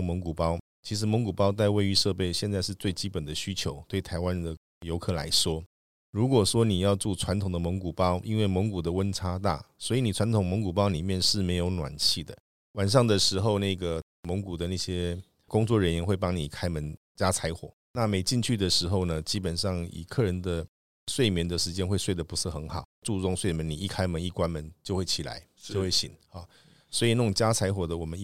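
No technical faults are audible.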